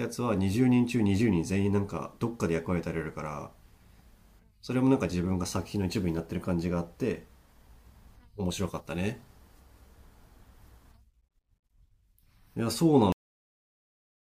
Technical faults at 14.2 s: cut-off end

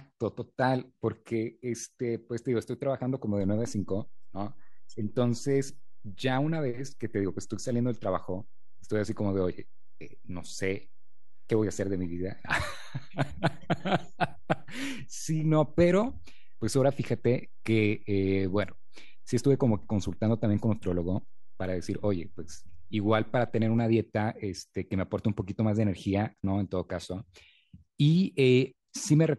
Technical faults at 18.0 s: DC step

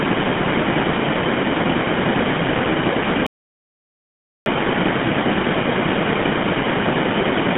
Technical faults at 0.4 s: GSM full-rate codec

